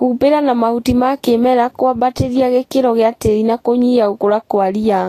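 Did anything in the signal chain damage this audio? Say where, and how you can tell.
Yes. Throughout the speech the top end is hissy and grainy, with nothing above about 14.2 kHz, sibilants turned to coarse noise, and consonant onsets smeared. The damage sits at the codec stage, likely Vorbis compression at a low bitrate, which fits something around 33 kbps. At that setting the encoder lowers its cut-off and quantises the residue above its spectral floor so coarsely that treble detail is replaced by noise of similar energy.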